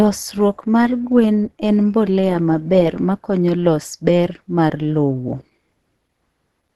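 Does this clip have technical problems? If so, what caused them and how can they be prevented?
Yes. Throughout, the speech sounds muffled and hoarse with nothing above 12 kHz, likely from Opus compression in hybrid mode at a rate consistent with about 16 kbps. Encoding at a higher bitrate prevents this.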